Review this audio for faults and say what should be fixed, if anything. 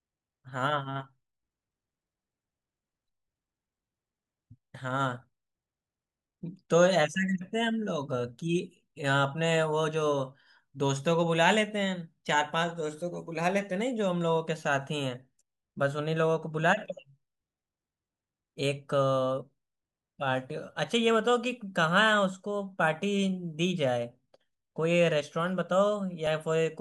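At 26.27 s the speech jumps forward, with no gap of silence. This is likely a dropped buffer (overrun): samples were overwritten before being read, so roughly a millisecond and a half vanished and the two sides were joined. Enlarging the capture buffer or giving the recording thread higher priority would prevent it.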